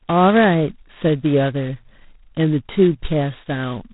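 From start to end the speech carries G.726 ADPCM damage, with nothing above 3.8 kHz and a harsh, rasping hiss that rises and falls with the speech level, which fits 16 kbit/s coding.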